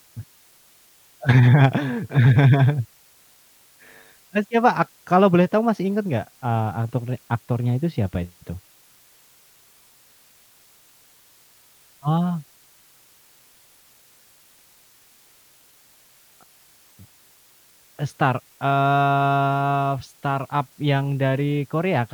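Throughout the speech runs a constant, even hiss, the mark of low bit depth with dither: about 9 bits, with noise added before rounding, turns quantisation error into steady white noise roughly 35 dB below the voice. Undithered truncation would instead give grainy distortion that follows the speech.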